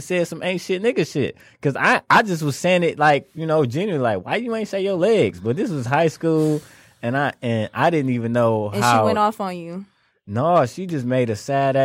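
No technical faults can be heard anywhere in this recording.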